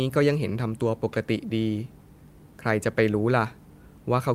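Speech recording with no audible technical faults at any point.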